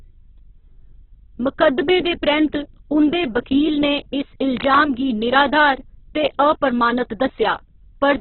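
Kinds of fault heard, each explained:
Opus compression, throughout: The speech sounds rough, grainy and noisy, with nothing above about 4.1 kHz. The likely cause is Opus in its music mode, starved of bits, filling bands with folded or noise content. The narrow band and heavy damage fit a rate near 8 kbps.
Cable scratch noise, 4.57 to 4.84 s: A brief patch of dense, uneven scratching rustles over the speech, roughly 15 dB below it. This is likely a worn cable or connector being moved, its contact resistance flickering and injecting bursts of noise.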